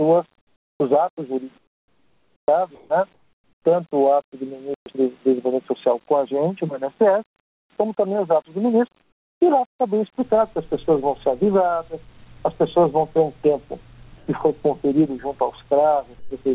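Comfort noise in place of the background first appears from 0.38 to 0.80 s and again from 1.58 to 2.48 s. The likely cause is discontinuous transmission: the sender stopped sending during pauses, and the receiver filled each gap with synthetic, featureless hiss. The first patch is only about 1 dB below the real background, and the second about 4 dB below. On a spectrogram, the textured background gives way to a smooth, uniform wash that, like everything here, ends at 4 kHz, which fits a narrowband G.711 call path.

From 2.75 to 2.90 s, sound is dropped by the voice detector. The detector likely mistook a quiet tail for background, so roughly 60 ms of real sound is replaced by steady noise before the sound resumes. In the waveform, the envelope is cut off abruptly into a flat, low band. The spectrogram shows harmonic or transient detail ending in a vertical edge and being replaced by even noise.

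Comfort noise returns from 3.14 to 3.65 s, about 11 dB quieter than the background it replaces. The drop is audible as a sudden hollow hush, and the waveform shows a step down in the noise floor.

At 4.74 s, a playback stall likely occurs because the player starved or blocked, and the output goes silent for 120 ms. The waveform shows a flat, silent gap, and the spectrogram shows a blank vertical strip.

Time-compressed catch-up follows immediately, from 4.86 to 4.98 s. The player plays its backlog at 2x speed without changing pitch, so the sound is hurried. On the spectrogram, events appear squeezed together, and faint splice seams from the cross-faded pieces are visible.

Further comfort-noise patches occur at 7.40 to 7.70 s, about 19 dB down, and at 9.02 to 9.41 s, about 16 dB down. These are the most obvious ones: the background almost vanishes into a faint, even hiss. On a spectrogram, each appears as a dark, uniform block.

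From 14.18 to 14.27 s, the voice detector again drops sound, cutting about 70 ms and substituting noise. The result is sound cut short, with the same vertical cut-off edge seen earlier.

A final comfort-noise patch runs from 16.19 to 16.31 s, about 7 dB below the background. It is brief, but the smooth band that replaces the textured floor is still visible.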